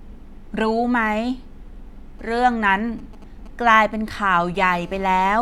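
A speech recording picks up interference from a nearby 2G phone. From 2.19 to 4.65 s there are GSM signalling bursts: galloping groups of ticks and brief 217 Hz buzzes, well below the speech. From 4.74 to 5.37 s a steady GSM phone buzz follows. It is a hard, raspy 217 Hz tone with many harmonics, about 26 dB below the speech. The audio circuit is rectifying the phone's radio pulses.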